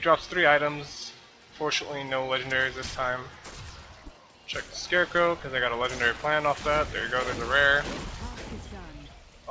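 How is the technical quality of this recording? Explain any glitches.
The technical quality holds steady, with no glitches to explain.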